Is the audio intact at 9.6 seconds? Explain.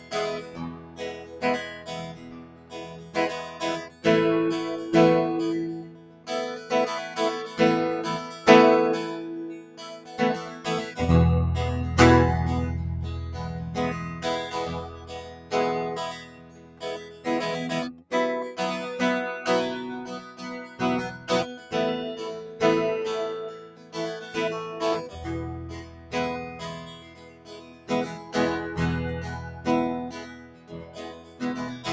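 No. From 9.54 to 10.95 s the held parts of the music sink by up to about 11 dB, with their decay cut short, for about a second in total. This is sound cut by the noise suppressor, which took those sustained tones for background noise and pulled them down while sharper attacks passed.

Throughout the music, level pumps and thins by as much as around 15 dB. A noise suppressor designed for speech was left running on music, treating steady tones and tails as noise.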